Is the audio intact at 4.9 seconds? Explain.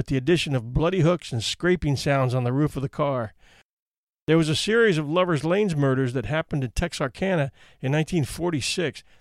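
Yes, the audio is intact at 4.9 seconds, with no dropout, click, distortion or other fault to be heard at that moment.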